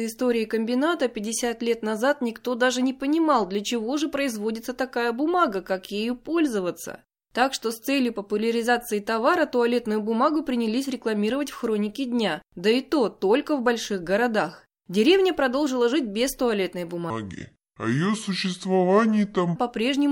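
Speech, with a section at the wrong speed from 17.10 to 19.56 s, just after "продолжила жить без туалетной". It plays at 0.681 times normal speed, dropping pitch roughly seven semitones, likely from a clock mismatch. A spectrogram shows harmonics squeezed lower, and the waveform looks stretched.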